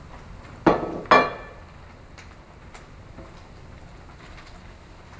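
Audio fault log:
throughout, wrong sample rate: the audio plays at a little over a third of its proper speed (0.363x) and is pitched down by about 17.6 semitones, nearly an octave and a half. Speed and pitch fall together by the same ratio, so the samples are being clocked out more slowly than they were captured, with no rate conversion. The ratio fits material recorded at 44.1 kHz being played back at 16 kHz. Everything sounds sluggish, dark and stretched out.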